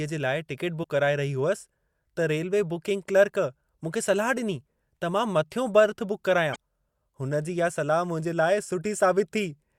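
At 0.80–0.84 s and 6.52–6.56 s, damaged data in the compressed stream makes the decoder misread frames and resync, producing brief glitches.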